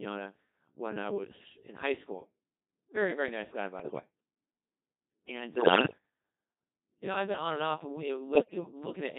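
From the start the speech carries the Codec 2 vocoder's heavy damage, consistent with its 2.4 kbit/s mode. The decoder rebuilds each frame from pitch, voicing and a spectral envelope, so the result is buzzy and robotic, with neatly stacked harmonic lines on a spectrogram and a waveform unlike the original.

Bit errors on digital voice radio strike at 1.24–1.50 s, 3.80–4.00 s, 5.56–5.98 s and 8.36–8.72 s, with a few percent of bits flipped. Corrupted frame parameters make pitch, level and timbre lurch into bleeps and warbling gibberish, visible as abrupt frame-wise jumps in harmonic spacing and energy.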